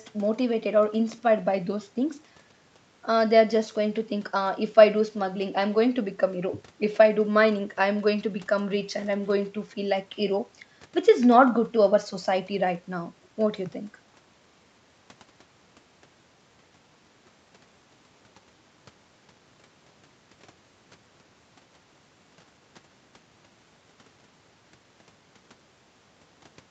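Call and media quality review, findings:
Nothing to flag on this speech clip; it's been through the usual call microphone processing and the WebRTC call path with the Opus codec, which tops the sound out at about 8 kHz, and nothing in it needs a ticket.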